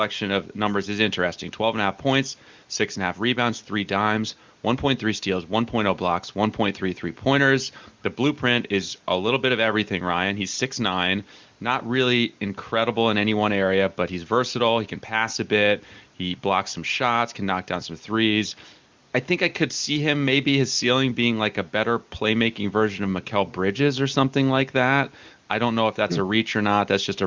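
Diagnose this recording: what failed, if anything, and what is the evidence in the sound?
Nothing stood out on listening; the speech carries the narrowed top end of an HD Voice call, with nothing heard above roughly 7 kHz, and no failure in any stage draws attention to itself.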